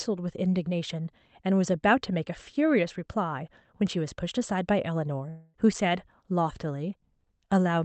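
A speech recording carried over a call path, where a long network dropout is the likely cause of trouble at 5.29 to 5.56 s: packets stopped arriving, and about 0.24 s of audio never reached the listener. The receiver covered the hole by stretching the last sound into a buzzy, fading tail rather than leaving silence, and the speech then resumes with that stretch simply missing. The call codec's coding noise and a high-frequency cut-off at 8 kHz, consistent with Opus at around 32 kbps, are also audible.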